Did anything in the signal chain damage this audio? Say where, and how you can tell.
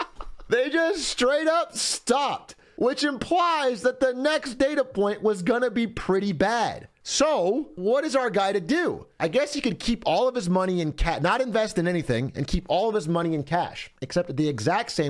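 No, nothing in the audio stood out on listening as a sign of damage anywhere in the chain.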